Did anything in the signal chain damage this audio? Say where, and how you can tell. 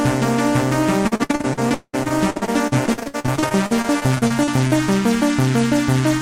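Yes: repeated packet loss on the network path, 1.07 to 4.73 s. Dozens of holes, up to 190 ms, filled by stretching prior sound, make about a third choppy and robotic.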